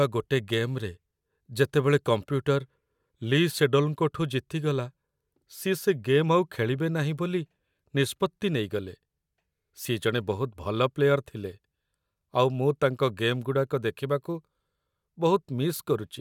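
Speech recording, no audible technical faults found.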